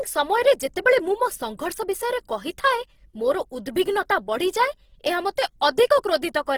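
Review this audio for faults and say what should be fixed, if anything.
Throughout the speech, the sound is grainy, rough and noisy, with harmonic detail turned to hiss rather than swirling, while content still reaches about 20.3 kHz. This is likely Opus compression in its CELT mode, filling starved bands with folded or noise energy, which fits a bitrate around 16 kbps. Encode at a higher bitrate or work from the original source to prevent it.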